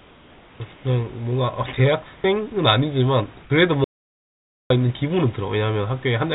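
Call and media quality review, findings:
Comfort noise in place of the background at 0.0 to 0.6 s, 0.74 to 0.84 s and 2.16 to 2.24 s. Room tone swapped for flat, featureless hiss, about 3 dB quieter in the first two pauses and about 5 dB in the third. Likely DTX on the sender with receiver-side noise fill.

Sound dropped by the voice detector at 3.42 to 3.5 s. About 40 ms of speech misjudged as background, replaced by 80 ms of steady synthetic noise until the detector retriggers. Likely sender VAD clipping a soft segment.

Audio dropout to silence at 3.84 to 4.70 s. Speech cuts to silence for about 0.86 s, with no room tone underneath, then resumes mid-flow. Content in the gap is lost. Likely input loss upstream of the encoder, such as a device drop or mute, over a narrowband call path with nothing above 4 kHz, which points to G.711 mu-law at 64 kbps.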